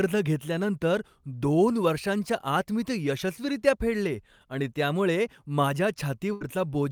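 Right after "फेडले आणि त्यामुळे माझ्या", at 6.33 to 6.43 s, there's a burst of packet loss. The receiver papers over about 72 ms by stretching and fading the last sound, then the speech picks up again with roughly 80 ms simply gone.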